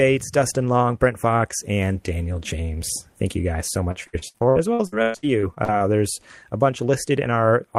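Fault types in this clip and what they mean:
Repeated packet loss (robotic sound): Between 3.91 and 5.82 s the speech breaks up into what sounds like around fifteen short holes, the longest about 121 ms. Each hole is patched by stretching the last fragment, so about 35% of that stretch is filled-in rather than real, giving a choppy, robotic texture. Unlike a single dropout or one concealed gap, the holes here keep recurring in quick succession.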